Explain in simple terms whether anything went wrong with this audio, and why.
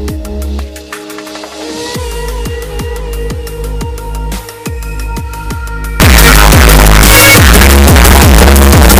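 Something goes badly wrong from 6.0 s to the end: the sound turns into loud, harsh distortion, with quiet moments just as loud as the rest. That's likely signed and unsigned mixed up, where the 8-bit samples get read with the wrong sign convention, so every swing through zero jumps across the whole range.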